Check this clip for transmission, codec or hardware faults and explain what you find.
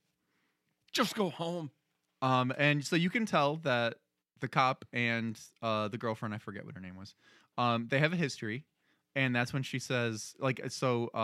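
No faults found in this recording.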